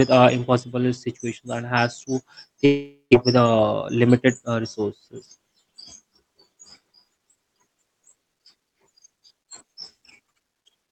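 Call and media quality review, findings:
Long network dropout, 2.65 to 3.15 s, right after "situations and has to": sound smears into a fading buzz, then about 140 ms of near-silence, and speech resumes with roughly 400 ms missing. Likely cause: packet loss, with the jitter buffer concealing about 480 ms by extending the last audio, then re-syncing with a delay change of around 50 ms. Lost content not recovered.

Jitter buffer speed-up, 3.81 to 4.27 s: speech briefly hurried, about 7% fast (107%) with unchanged pitch. Component: jitter buffer draining excess queued audio, cutting repeated pitch-period-length slices totalling about 40 ms. Rhythm tightens; band-limited Opus sound, top near 8 kHz, continues through it.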